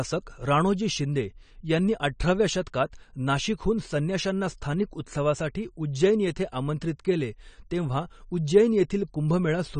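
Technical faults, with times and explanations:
Throughout, AAC compression: the speech sounds dull and smeared, with nothing at all above about 9 kHz and a warbly, fizzy edge on sibilants and held sounds. That points to a likely low-bitrate AAC-LC encode, somewhere around 32 kbps. At that rate the encoder saves bits by cutting off the top of the spectrum and quantising the rest coarsely, so high detail is lost and leftover bands come out swirly.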